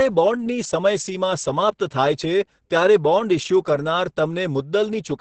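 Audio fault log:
throughout Opus voice compression: muffled, hoarse, slightly robotic speech with nothing above 8.8 kHz; coarse SILK-style predictive coding of a wideband signal, fitting roughly 10 kbps.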